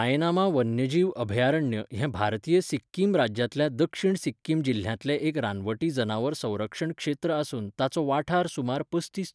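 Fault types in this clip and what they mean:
No technical fault can be heard anywhere in this speech recording; the signal holds steady and continuous throughout.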